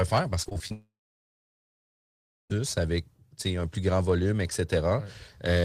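From 0.43 to 0.72 s the speech breaks up with repeated packet loss, giving a choppy, robotic sound. Five short holes open in quick succession, the longest 21 ms, and each is patched by stretching the preceding sound, so nearly a third of this span is synthetic filler. Unlike a single dropout, the audio keeps returning between holes, so it stutters rather than going quiet.

Straight after, from 0.72 to 2.52 s, the sound stops arriving altogether, most likely a long network dropout. The receiver briefly extends the last sound as a fading buzz, then about 1.6 s of near silence follows. Speech resumes at "avec un plus grand" with roughly 1.8 s simply gone. What separates this from the earlier chopping is one unbroken gap that decays into silence, with no fragments of real audio slipping through.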